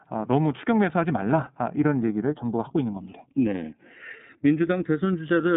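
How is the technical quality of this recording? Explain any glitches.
The recording has two faults running through its whole length.

Channels drifting apart, throughout: the two channels run on slightly mismatched clocks, roughly 150 ppm apart, so the gap between them grows to under a millisecond by the end. In mono this gives a slow, steadily sweeping flange, unlike a fixed offset, whose comb coloration stays still.

iLBC codec, throughout: the speech sits in a narrow band from about 150 Hz to 3.7 kHz, with nothing above 3.8 kHz. The coding damage is plainly audible as a rough, slightly synthetic edge, which fits 30 ms frames at 13.33 kbps. A plain low-pass would sound dull but smooth, without this grain.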